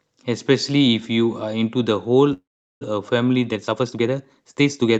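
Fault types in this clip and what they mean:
Call audio freeze: From 2.33 to 2.83 s the sound stops moving forward. The last moment is carried on as a brief fading buzz, then about 0.39 s of near silence, before the audio picks up exactly where it stopped. This is likely packets held up in transit emptying the jitter buffer. Unlike a packet-loss dropout, nothing is skipped. About half a second of delay is inserted, and everything afterwards lands later.
Time-stretched section: From 3.49 s to the end, the speech suddenly runs about 1.48 times faster while its pitch stays the same, so it sounds rushed. The likely cause is software squeezing the audio to fit a set length. A plain playback speed-up would raise the pitch along with the pace, which does not happen here.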